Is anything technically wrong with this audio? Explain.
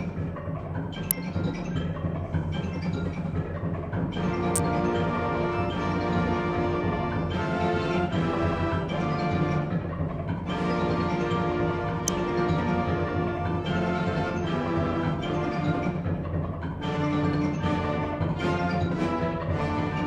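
Yes. An electrical switching spike occurs at 1.11 s, 4.56 to 4.58 s and 12.08 s, most likely a nearby switch or motor arcing into the signal line. Each is a sharp snap laid over the sound, peaking at roughly -5 dBFS for the first two and about -10 dBFS for the last.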